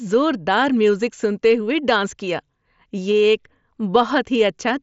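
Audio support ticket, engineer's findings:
No faults found: the speech arrives over a Bluetooth mSBC headset link at roughly 61 kbps, with bandwidth ending near 7.7 kHz as that wideband codec path allows.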